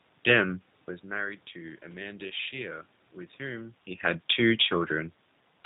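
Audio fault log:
throughout, G.729 codec: the speech is plainly rough and buzzy, slightly synthetic, with nothing above 4 kHz, and the room noise warbles. Each 10 ms frame is rebuilt from a vocal tract filter, pitch prediction and sparse pulses, which fits an 8 kbit/s coder.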